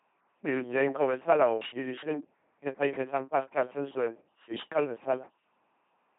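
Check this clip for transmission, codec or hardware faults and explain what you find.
One codec fault runs through the whole recording. The speech has been carried by an LPC-10 vocoder, heavily damaged, from start to finish. The voice comes out buzzing and mechanical, like a robot. The coder rebuilds each short stretch from a simple vocal tract filter. That filter is fed either a pulse train or noise, never a mix. Where the voiced or unvoiced choice goes wrong, buzz or hiss replaces natural sound. Nothing remains above 3.8 kHz. The coarse quality fits a 2.4 kbit/s stream.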